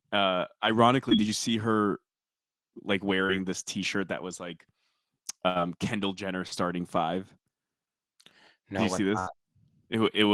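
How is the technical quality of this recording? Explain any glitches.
The recording has five network dropouts: three short concealed packet losses and two longer bursts of packet loss.

Short concealed packet loss occurs at 1.09–1.13 s, just before "did you see her", at 3.27–3.31 s, and at 6.47–6.53 s. In each case 20 to 40 ms of audio never arrived in time. The decoder extrapolated the preceding sound for 13 to 40 ms and then blended back, which is heard as a brief smear or wobble.

Bursts of packet loss occur at 5.49–5.57 s and 9.19–9.29 s. Consecutive data, 60 and 80 ms respectively, was lost. The receiver sustained and faded the last sound for about 66 and 75 ms, producing a held buzz or fading hiss before playback resumes with that stretch missing.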